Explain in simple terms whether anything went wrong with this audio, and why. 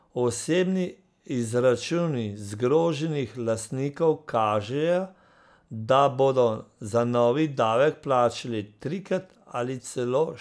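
Nothing went wrong with this speech recording that a listener could pick out as a technical problem. At no point does the audio itself misbehave in a way that calls for an explanation.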